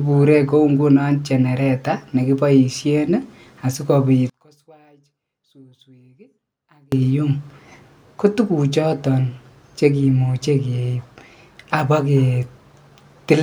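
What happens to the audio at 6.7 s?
At 6.7 s the speech is near the end of a stretch from 4.30 to 6.92 s, just after "genereta nekiboishen asikobit", where it falls by about 33 dB to a faint trace. That collapse is likely one channel inverted: with one side's polarity reversed, everything shared by both channels cancels when summed to mono, leaving only their small difference. Unlike a dropout or mute, a faint residue stays audible rather than true silence.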